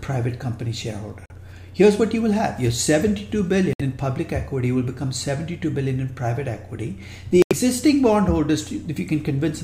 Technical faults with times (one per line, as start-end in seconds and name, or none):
1.26-1.32 Bluetooth dropout
3.73-3.81 Bluetooth dropout
7.42-7.53 Bluetooth dropout